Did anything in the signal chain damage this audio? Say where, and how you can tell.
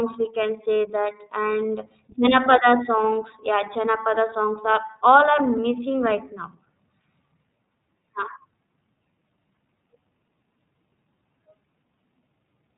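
Yes. iLBC codec damage runs throughout: nothing above 4 kHz, rough, synthetic speech, which fits 13.33 kbps with 30 ms frames coded independently at the codec stage.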